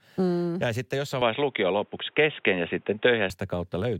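An input switched to a poorer device from 1.22 s to 3.3 s, right after "sitten jossain". The speech turns dull and boxy, with nothing above about 3.8 kHz, a shift in level of about 5 dB, and a faint new background noise well below the voice. This is likely the recording input jumping to a narrower-band microphone or headset profile. There is no gap at the switch, and the fuller sound returns at 3.3 s.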